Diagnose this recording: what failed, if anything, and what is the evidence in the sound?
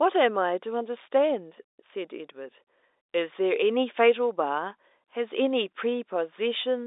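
Nothing here has failed: the speech comes over an ordinary G.711 telephone line, with the band running roughly 300 Hz to 3.7 kHz and nothing above about 3.8 kHz, just what that 64 kbps format gives you.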